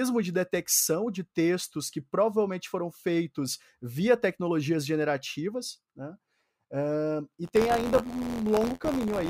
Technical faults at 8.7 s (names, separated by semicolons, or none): buffer tearing